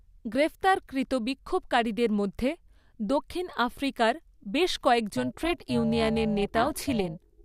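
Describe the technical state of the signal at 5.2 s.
At 5.2 s you're inside an overlap-add ripple that kicks in at 5.17 s, right after "দক্ষিণ আফ্রিকার বেশ", and runs to the end. The reassembled frames don't overlap to a flat gain, so the level pumps by about 11 dB around 400 times a second, giving a metallic buzz with extra tones around the voice.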